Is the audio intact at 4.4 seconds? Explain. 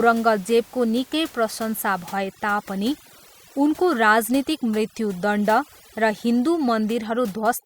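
No. From 2.13 s to the end of the clip, overdone noise removal is at work. An over-aggressive noise reduction pulls individual frequency bands down or out whenever they sit near its noise estimate. The room noise, about 24 dB under the speech, drops and breaks up into twinkling specks, and quiet parts of the voice are shaved away. Unlike codec smearing, the artefacts cluster in the gaps and soft passages.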